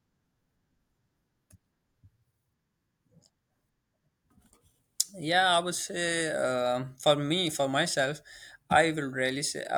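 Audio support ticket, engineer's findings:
No audible faults found on the speech recording. Nothing to escalate; closing the ticket.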